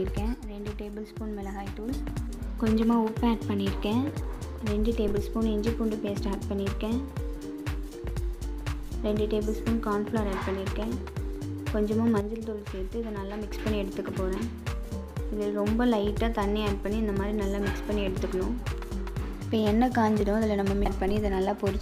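One stereo channel likely drops out twice, from 0.34 to 1.89 s and from 12.21 to 13.52 s. In the mono sum the shared sound falls abruptly by about 6 dB, and anything carried only in the lost channel vanishes until it returns.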